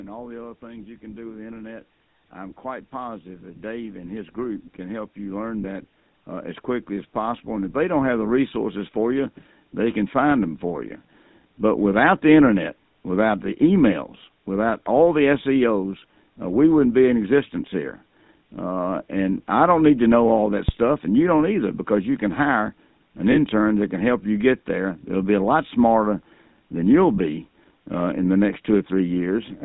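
Throughout the clip, the speech has passed through the GSM full-rate codec, which fits the 13 kbps full-rate coder. It models the vocal tract and excites it with regularly spaced pulses, keeping only a third of the excitation samples and nothing above 4 kHz. The damage is plainly audible: the speech has a buzzy, gravelly roughness and a dull, band-limited top end, sitting on top of the ordinary bass roll-off of the call's microphone processing.

Lost GSM frames occur three times, at 5.62 to 5.65 s, at 23.32 to 23.37 s between "you can hire an" and "that can help you", and at 27.16 to 27.19 s just after "lot smarter than you'll". Each gap fits a single lost 20 ms frame. The decoder filled each one by repeating the last good frame's settings, so each is heard as a brief rough, metallic ring.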